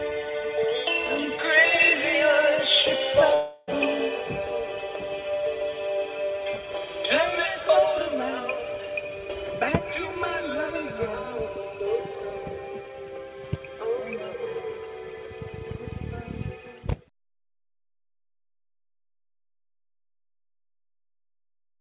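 At 3.34 s the audio stops arriving and the gap runs until about 3.69 s, likely a long network dropout. Roughly a third of a second of sound goes missing, and the receiver papers over it by stretching the last bit it had into a buzzy tail that fades without ever dropping to true silence. When the sound resumes, the lost chunk is simply gone. The whole clip is band-limited with nothing above 4 kHz, which fits a G.711 A-law call path.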